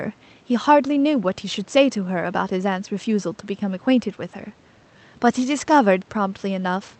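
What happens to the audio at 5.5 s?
Nothing goes wrong at 5.5 s: the speech carries on intact through the call path, with no dropout, glitch or other fault at that moment.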